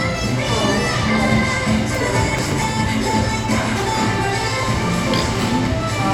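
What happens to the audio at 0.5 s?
Nothing goes wrong at 0.5 s: the sound carries on intact there, with no dropout, click, distortion or other fault at that moment.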